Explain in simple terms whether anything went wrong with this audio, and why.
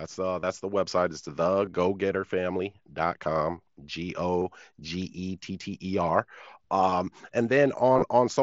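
Short buzzy blips break into the speech at 0.40–0.43 s, just before "the website", at 1.65 s, 4.39–4.42 s, 6.90 s, and in a scattered cluster from 7.93 to 8.02 s. This is concealed Bluetooth headset packet loss: headset packets went missing, and the phone filled each gap by repeating a matching slice of the preceding sound.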